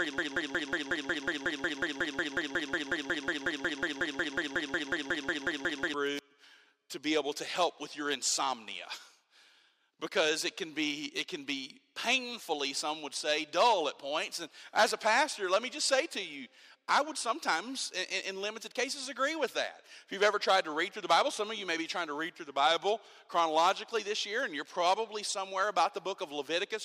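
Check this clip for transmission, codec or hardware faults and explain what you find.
One fault. From the start to 5.94 s, a broken-record loop: a 0.18 s fragment repeats identically, back to back, about thirty times. This likely comes from a stalled player or stream resending its last buffer, so that stretch of audio is lost. The exact, unvarying copies set it apart from echo or stutter.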